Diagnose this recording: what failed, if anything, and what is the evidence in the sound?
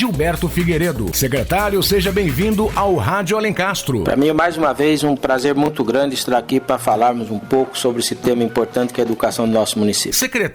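The wireless link hiccups with a brief Bluetooth stutter between 5.66 and 5.68 s: a 20 ms slice of sound repeats once, then the audio resumes a bit further on, as if it had kept playing. That fits a single late or lost packet, with the receiver replaying its last buffer.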